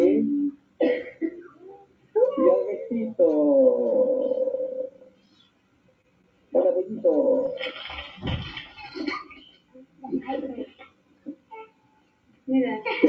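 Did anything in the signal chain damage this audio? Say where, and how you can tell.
Yes. Across the whole clip, held tones and tails keep sinking while attacks punch through, so the level pumps and thins by around 20 dB. That is a call-processing stage: a noise suppressor built for speech was left on and treats steady sound as noise.

The clearest cuts come at 0.52–0.80 s, 1.13–2.15 s, 4.88–6.54 s, 9.23–10.08 s and 10.66–12.48 s, where sustained material drops by up to about 17 dB. Each is the sound cut by the noise suppressor, which turned these stretches down harder than the rest.

At 6.02–6.06 s there is a brief smear lasting about 19 ms. This is short concealed packet loss on the network side: 20 ms never arrived, so the receiver extended the preceding sound to cover the gap, then blended back.

At 6.22–6.26 s a sound hangs on for about 22 ms with a faint buzz, but nothing is skipped. 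This is a short stall from a late packet: the jitter buffer emptied, and the receiver stretched the last sound until the packet arrived.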